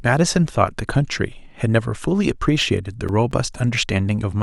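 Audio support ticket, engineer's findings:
CD scratch ticks, speech, 2.62 to 3.78 s. Six short ticks, evenly spaced at about five a second, longest well under 10 ms. Probable component: disc surface, read chain in CD player. Scratch exceeds error correction once per revolution; player interpolates or mutes damaged samples. Distinct from random digital clicks or buffer dropouts by the steady rotation-locked spacing.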